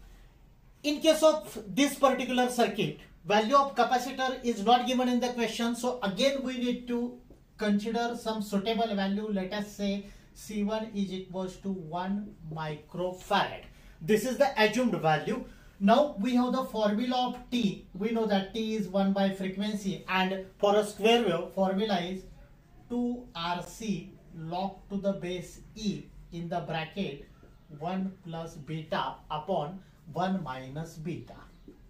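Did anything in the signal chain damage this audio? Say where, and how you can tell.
Yes: a gap between stream segments at playback, with hard-edged silent holes at 17.63 s and 23.65 s, six seconds apart. Mismatched segment timestamps left 8.5 ms and 13.7 ms unfilled.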